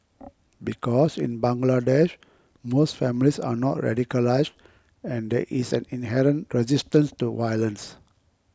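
No technical faults detected.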